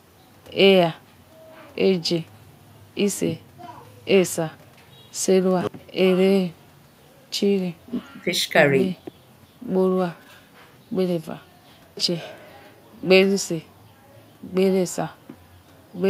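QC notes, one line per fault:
Nothing to flag here, no technical faults turned up anywhere in the audio.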